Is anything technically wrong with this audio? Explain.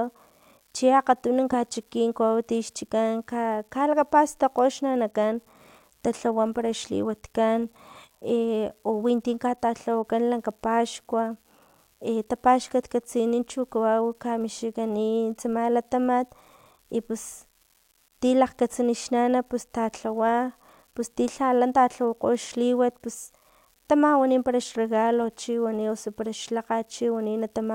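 Yes. Throughout the speech there's an unreliable data bit: one marginal line flips randomly, each error a same-size spike about -42 dBFS, giving a steady fizz that carries on through pauses.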